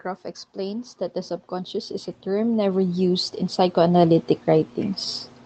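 From 0.53 s to 5.06 s the level climbs steadily. This is automatic gain rising. The gain control judged the input too quiet and kept turning it up, by about 16 dB in total. The rise is slow, not a jump. Speech and background noise swell together, so the room grows louder along with the talker. The call codec path underneath carries its own coding texture, with top end stopping near 8 kHz, which fits Opus at about 24 kbps.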